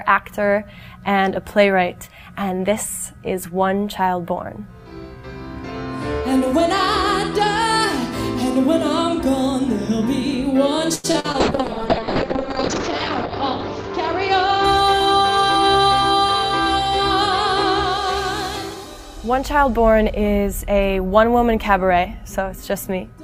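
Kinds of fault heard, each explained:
Repeated packet loss (robotic sound): Between 10.95 and 11.36 s, four short holes open in quick succession, the longest 84 ms. Each is patched by stretching the preceding sound. About 41% of that stretch is filled in, so it turns choppy.
Call bitrate drop: From 11.40 to 16.17 s the encoder codes far more coarsely. The sound points to a fall from a full-rate stream to a very low one. The top end is cut from 20 kHz to 8 kHz, so the audio turns muffled and rough.
Jitter buffer speed-up: The receiver trims short pitch-period slices to shed a backlog of a few tens of milliseconds. From 14.00 to 15.92 s the audio runs about 2% fast. From 21.56 to 22.14 s it runs about 6% fast, noticeably hurried, with pitch unchanged.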